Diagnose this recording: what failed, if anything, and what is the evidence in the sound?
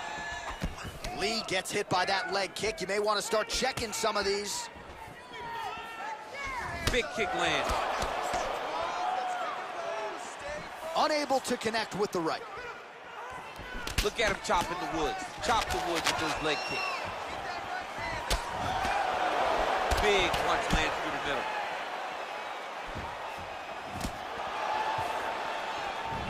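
From 15.22 to 16.34 s a burst of dense, uneven scratching and rustling sits over the sound, running only about 5 dB below it. This is cable scratch noise, pointing to the analogue wiring stage. The likely cause is a worn cable, connector or control carrying a DC voltage being moved: its contact resistance jumps about rapidly, and those fluctuations modulate the DC into irregular noise bursts lasting just over a second.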